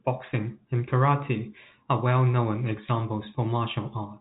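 No faults can be heard in this speech recording.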